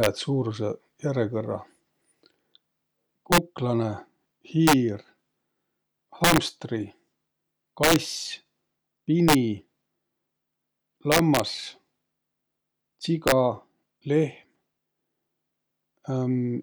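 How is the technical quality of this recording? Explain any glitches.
The recording is marred by repeated integer overflow on loud speech peaks, at 0.04–0.06, 3.32–3.38, 4.67–4.73, 6.24–6.38, 7.84–7.96, 9.29–9.35, 11.12–11.40 and 13.28–13.32 s. Peaks pushed about 1 to 6 dB past the integer ceiling wrap to the opposite extreme, producing violent cracks. Clipping would flatten the tops into a duller buzz.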